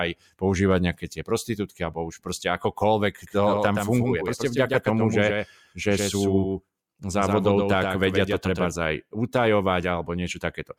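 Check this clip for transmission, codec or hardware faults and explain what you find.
One fault is present in this speech clip: a doubled audio track from 3.27 s to 8.69 s. A second full-band copy of the speech runs about 150 ms behind the original and a few decibels quieter. It likely comes from the signal being captured twice, once through a slower path, or from an edit that leaves two copies out of step. The copy has no reverberant tail or room colouring, giving a hard slapback echo, and it cuts in and out abruptly at both ends.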